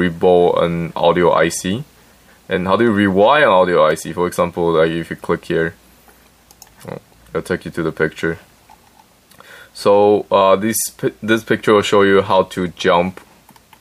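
No technical faults can be heard anywhere in this clip. There is nothing in the recording or its transmission to point to.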